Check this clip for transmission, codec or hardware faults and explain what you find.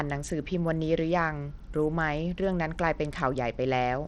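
The speech carries a codec fault for its whole length, most likely Bluetooth SBC compression. The treble thins and flickers, and a gritty noise rides on the sound. That fits a low bit pool, around 80 kbps, starving the upper sub-bands of bits and coarsely quantising the rest, which leaves aliasing behind.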